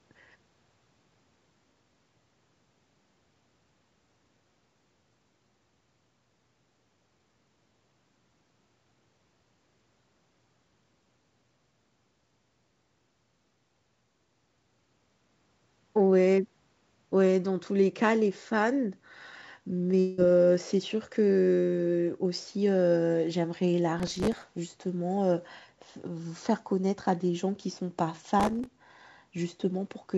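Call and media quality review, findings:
Long network dropout, 20.00–20.21 s. About 0.18 s of audio missing, likely from packet loss on the network. Receiver concealment stretches the last sound into a fading buzz across nearly the whole gap. Playback resumes afterwards with that segment lost.

Processor overload crackle, 24.00–24.55 s and 28.40–28.66 s. Gritty tearing over the speech. The processing thread misses its deadlines many times in a row, and each miss replays stale audio with hard edges. The grain suggests buffers of roughly 3 ms. Each burst clears once the load drops. Band limit at 8 kHz, consistent with a G.722 call path.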